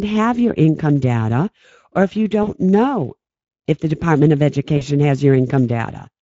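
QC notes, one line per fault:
throughout: Speex codec. The speech sounds hoarse and grainy, with a hissy, noise-like top end instead of real detail above 4 kHz. This fits a mid-range Speex setting near 17 kbps, which leaves too few bits to code the excitation cleanly.
2.43–2.51 s and 4.77–4.83 s: VoIP packet loss concealed by the speech codec. The first gap falls after "data or if you" and before "know if the". At both points about 40 ms of audio is stretched into a fading fill, and the voice stays weak and distorted for a moment afterwards. The decoder filled the missing packets by extending its last pitch and filter at dropping gain, and that guessed state carried into the frames that followed.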